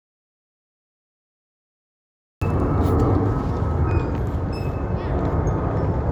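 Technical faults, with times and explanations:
0.00 to 2.42 s, audio dropout to silence: the sound is already cut at the start, dead digital silence with no room tone, likely a lost input while zeros kept getting written.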